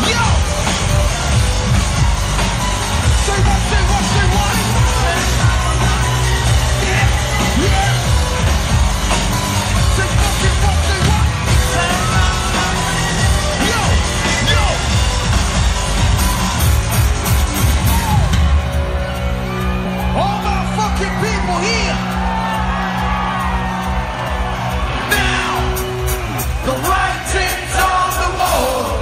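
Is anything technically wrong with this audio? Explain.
Yes, two things. The whole clip has a watery, swirly quality with dulled treble and smeared attacks, and the likely cause is MP3 compression at a low rate, around 64 kbps. With bits that tight, the encoder cuts off the top end and lets weak frequency content flicker in and out between frames.

There are also compressed frames skipped at 19.84 s and 28.39 s. The sound jumps ahead by about 50 ms and then about 100 ms, which fits two and four frames of roughly 26 ms going missing. Because MP3 frames overlap, each join sounds like a short smeared blip, not a sharp click.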